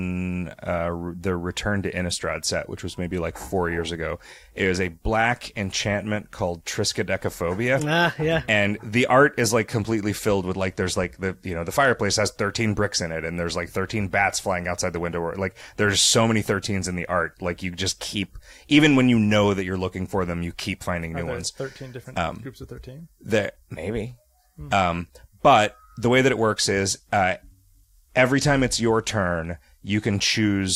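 Bluetooth SBC bit pool drop twice, 10.41 to 12.16 s (after "art is like completely") and 26.90 to 30.16 s (after "way that it works"): treble goes dull and gritty, which fits the bit pool halving from 28 to 14, around 108 kbps.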